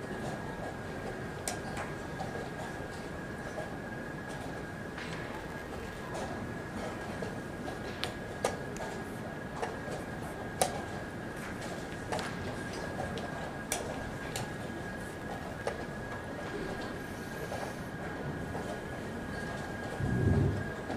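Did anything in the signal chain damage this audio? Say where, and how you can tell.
Yes. At the driver and buffer stage, the processor fell behind and missed a long run of buffer deadlines. From 5.33 to 6.09 s, processor overload crackle sounds like gritty tearing. The texture suggests very short buffers, around 1.5 ms, and roughly a hundred dropped to brief silent gaps with hard edges.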